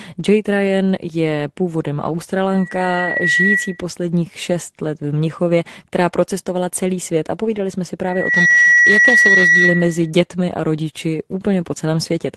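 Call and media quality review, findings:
Loudspeaker feedback squeal, 2.51–3.84 s after "je původem" and 8.03–10.11 s after "jsme si", clearing before "a rodiči". Steady 1.9 kHz tone swells over under a second in the first, about half a second in the second, reaching a few dB, then about 10 dB, above speech. Probable component: mic re-capturing its own loudspeaker, loop gain above one at 1.9 kHz. Unlike a codec tone artefact, it is one fixed pitch that grows.

Lost packet rebuilt from error correction, 2.97–3.07 s, 4.07–4.13 s, 7.45 s (between "procestovala celý svět a" and "jsme si"), 8.35 s inside the second squeal. Brief rough, noisier patches within the Opus audio with its roughly 12 kHz ceiling. Opus in-band FEC copies, lengths fitting one to three 20 ms packets. Unlike concealment, there is no gap, no smeared repeat.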